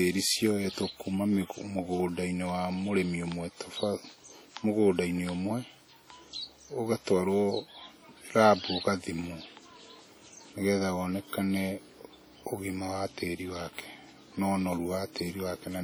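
Speech, with heavy WMA compression damage throughout. The sound rings and smears, and a washy hiss swells and fades with the signal. Quiet detail drops out. The content reaches about 20.1 kHz, yet the damage points to a low bitrate near 32 kbps, likely from long-block WMA encoding.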